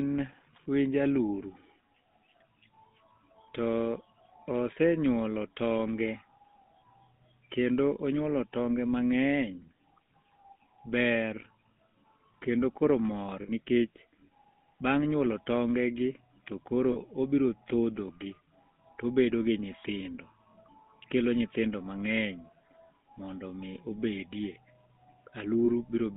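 A speech clip run through the GSM full-rate codec, with the buzzy, gravelly texture of that coder and a band of roughly 150 Hz to 3.5 kHz, which fits 13 kbps full rate. There are also lost GSM frames at 13.42–13.51 s after "kendo koro mor", at 16.92–16.98 s between "tonge gi to koro" and "obro thodhogi", and at 25.66–25.69 s. Each is a 60, 40 or 20 ms metallic ring where the decoder repeats the last good frame.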